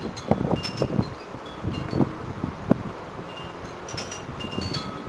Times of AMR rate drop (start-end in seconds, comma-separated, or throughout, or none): none